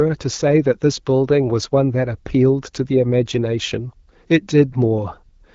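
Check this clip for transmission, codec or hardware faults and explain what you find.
No transmission, codec or hardware faults are audible here.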